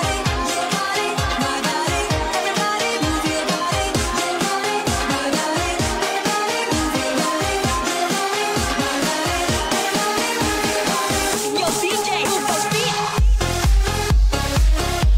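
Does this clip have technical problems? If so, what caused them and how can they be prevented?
No, nothing technical gets in the way here, so there's nothing to trace back or guard against next time.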